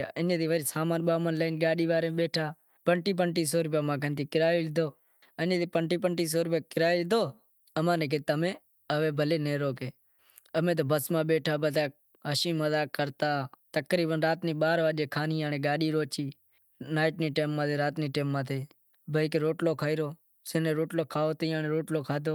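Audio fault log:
No faults found in this speech clip.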